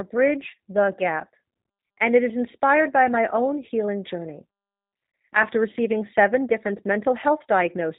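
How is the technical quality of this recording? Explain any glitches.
The recording is held back by plainly audible narrowband voice-codec damage running through the whole speech clip. Throughout, the sound fits the G.729 codec (the G.729A variant at a rate that points to 8 kbit/s). It resynthesises each 10 ms frame from a vocal-tract filter, a pitch predictor and a few pulses, so nothing survives above 4 kHz and the speech comes out rough, buzzy and synthetic. That pulse-built graininess sets it apart from a plain low-pass filter, which would muffle the sound but leave it smooth.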